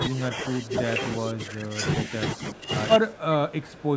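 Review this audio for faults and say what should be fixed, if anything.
Speech suppressed in double talk shows up twice, from 0.0 to 1.84 s and from 2.05 to 2.71 s. The talker's level sags by roughly 15 dB in places. About one and a half seconds are hit in the first stretch and about half a second in the second. The likely cause is an echo canceller that could not tell the talker from the far side's echo while both spoke. It turned everything down together. Prevention: use an echo canceller with better double-talk detection, or a headset on the far end.

One channel inverted starts at 2.96 s and runs to the end. The sound drops by about 25 dB. This is likely one stereo channel with reversed polarity. When the two channels are summed to mono, the shared centre content cancels. Only the faint difference between them survives. Prevention: check channel polarity in the capture and mixing chain before any mono downmix.

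Echo leak appears twice, from 3.13 to 3.2 s and from 3.62 to 3.83 s. A delayed copy of the speech trails the original by 361 ms. It sits about 30 dB below the speech in the first scrap and about 25 dB below in the second. It is likely loudspeaker playback that the far side's microphone picked up and its echo canceller did not fully remove. The bandwidth stops at 8 kHz, as expected from call microphone processing. Prevention: lower the far-side loudspeaker volume or tune that end's echo cancellation.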